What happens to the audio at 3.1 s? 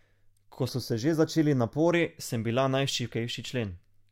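Nothing goes wrong at 3.1 s; the speech there plays through intact, with no dropout, click or distortion.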